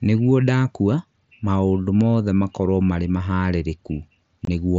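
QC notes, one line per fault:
0.18 to 4.71 s, clock slip clicks: faint, evenly spaced ticks about every 0.15 s, roughly thirty in all, riding on the louder speech and gone in pauses. The likely cause is two unsynchronised clocks drifting around 150 ppm apart, each tick marking a single dropped or repeated sample.
4.45 s, unconcealed Bluetooth headset packet loss: a 22.5 ms hole with abrupt edges cuts through the speech. That length fits three lost packets of 7.5 ms each, replaced by silence or an idle pattern rather than concealed, on an mSBC link whose own coding damage is light.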